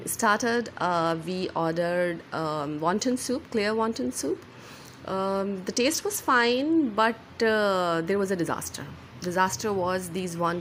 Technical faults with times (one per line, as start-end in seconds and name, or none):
0.53-1.59 Bluetooth SBC bit pool drop
5.77-6.76 Bluetooth SBC bit pool drop